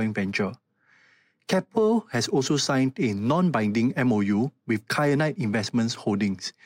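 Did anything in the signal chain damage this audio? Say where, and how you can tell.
No, no damage is audible.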